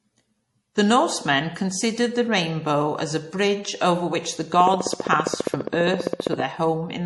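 Speech, with audible MP3 compression throughout. Nothing is heard above 11.4 kHz, and the sound has a watery, swirly quality with smeared attacks and metallic edges on s sounds. That damage fits a low bitrate, around 48 kbps. From 4.54 to 6.41 s a train of clicks ticks over the speech at a regular 15 per second. That is about thirty similar pulses, peaking roughly 15 dB above the speech. The likely cause is interference from nearby equipment or a faulty connection or power supply.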